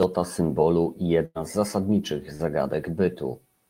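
At 1.25 to 1.37 s the speech stretches into a held, fading sound before jumping ahead: a burst of packet loss, with about 100 ms concealed and missing. At 2.35 to 2.41 s a brief smear marks short concealed packet loss, where about 40 ms was filled by continuing the preceding sound.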